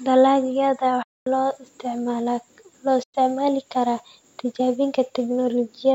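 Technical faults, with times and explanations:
1.03–1.27 s and 3.03–3.14 s, Bluetooth dropout: the speech cuts abruptly to silence for about 230 ms, then again for about 100 ms, and comes back further along as if it had kept playing underneath. That's likely audio packets reaching the headphones too late and being discarded.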